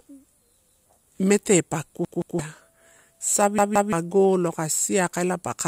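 From 0.13 s to the end, a faint, steady ticking runs under the speech about every 40 ms, roughly 150 clicks in all. These are clock slip clicks, likely from two unsynchronised clocks differing by around 500 ppm, each tick a single dropped or repeated sample. Unlike a buffer fault, no audible stretch of speech repeats.

Repeated buffer faults fall at 0.68 to 0.85 s, with one extra play, and at 2.05 to 2.39 s and 3.58 to 3.93 s, with two extra plays each. A 170.67 ms chunk, which fits an 8192-sample buffer, replays with hard joins, so the speech stutters instead of ticking and loses about 150 to 300 ms.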